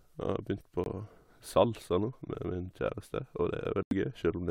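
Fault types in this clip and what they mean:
Corrupt frame muted: the speech cuts to abrupt digital silence at 0.84–0.88 s and again, for longer, at 3.83–3.93 s, where damaged compressed frames were rejected and blanked. Unlike concealment, nothing is smoothed over, and unlike a skip, the timing stays intact.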